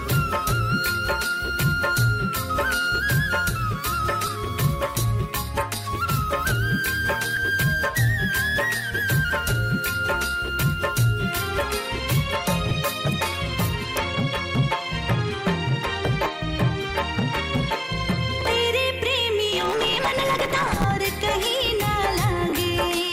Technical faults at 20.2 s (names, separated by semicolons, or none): block size mismatch (truncated)